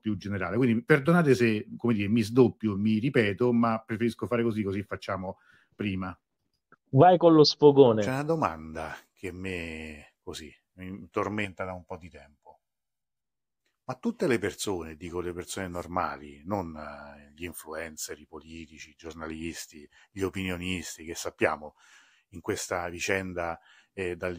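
From 11.45 to 13.24 s the speech turns hollow and phasey. This is channel delay, heard as comb filtering. One channel runs late by roughly a millisecond and a half. When the two are summed to mono, the shared content cancels at evenly spaced frequencies. The first deep notch falls somewhere around 400 Hz, with more repeating above it. The voice stays hollow for those 1.8 seconds.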